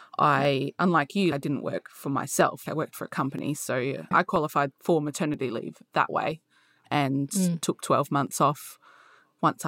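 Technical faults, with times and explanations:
0.45–9.25 s, clock drift buffer slips: a click recurs roughly every 0.98 s across this stretch, about ten in all. The steady spacing points to two devices likely running on clocks a few hundred parts per million apart, so the buffer between them keeps drifting until a short block of samples, which fits roughly fifteen, is dropped or repeated. On a waveform each slip shows as a discontinuity. A spectrogram shows evenly spaced thin vertical lines of broadband energy.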